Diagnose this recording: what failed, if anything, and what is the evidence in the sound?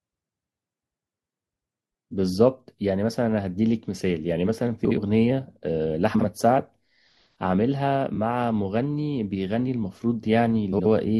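Frames out of order, at the network stage. Speech garbles briefly at 4.85–4.98, 6.14–6.24, 8.12–8.18 and 10.72–10.86 s. Adjacent blocks of 21 to 64 ms arrived swapped and were decoded that way. No time is lost.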